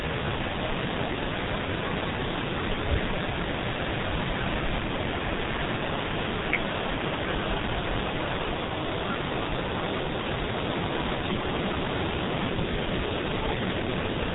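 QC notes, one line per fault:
throughout: G.723.1 codec. The speech is heavily damaged by this low-rate telephony codec: nothing above 3.8 kHz survives, so the top end is gone and the speech sounds muffled. The codec models the voice in coarse 30 ms frames and updates that model slowly, which smears fast transitions. Consonants blur together and the voice takes on a hoarse quality. The degree of damage fits a bitrate of roughly 6 kbit/s.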